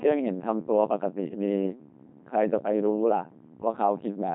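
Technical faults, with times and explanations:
Throughout, Codec 2 vocoder: the speech is heavily damaged, with a robotic, buzzy quality, and there is nothing above 3.8 kHz. The decoder rebuilds the voice from sine waves driven by pitch, voicing, energy and a coarse spectral envelope, and the degree of mangling fits a rate around 2.4 kbit/s. Unlike a low-bitrate waveform codec, it leaves no swirly or watery artefacts; the original waveform is simply gone and replaced by a synthetic voice.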